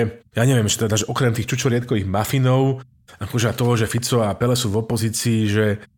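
A loud pop at 3.98 to 4.00 s: a single sharp pulse lasting about 20 ms sits on top of the speech, peaking a few decibels above it, while the talking carries on underneath without a break. The likely cause is a sudden voltage step or spike entering the signal chain, such as a plug being seated, a switch contact or a static discharge, which the downstream circuitry shapes into a brief click-thump.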